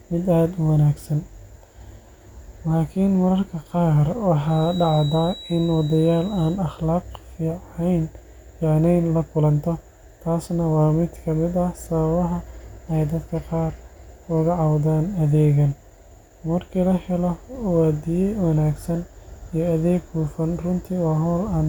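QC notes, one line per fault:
4.43–6.61 s, feedback whistle: a thin, steady 3.9 kHz tone sits well under the speech, swelling and fading slowly, likely a speaker-to-microphone loop held right at the edge of feedback.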